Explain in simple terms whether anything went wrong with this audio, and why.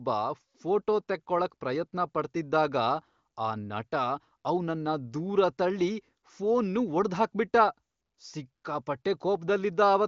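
Nothing went wrong here: this speech simply went through the AMR wideband (HD Voice) phone codec working as intended, which is why nothing reaches above about 7.5 kHz, and that top-end limit is just how that kind of call audio is built.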